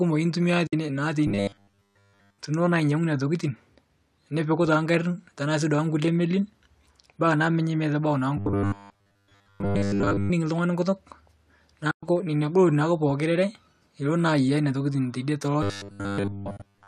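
At 0.67 to 0.73 s there's AAC frame loss with muting. About 60 ms of audio drops into a soft-edged hole, consistent with six lost 10 ms frames being zeroed by the decoder, so it fades out and back in. The same thing happens again at 11.91 to 12.03 s, where roughly 120 ms goes missing, and at 16.57 to 16.60 s, a short 30 ms gap.

From 1.27 to 2.39 s the speech turns into a rigid, metallic 100 Hz buzz that still loosely tracks the talking. That's robotic sound from repeated short buffers, likely caused by audio arriving too slowly so the player loops the last 10 ms or so. About 70% of the stretch is repeats. It comes back at 8.37 to 10.31 s, and again from 15.63 s to the end, where all of it is repeats and the last frame-loss gap sits inside. The low-delay AAC coding likely underneath adds only light damage.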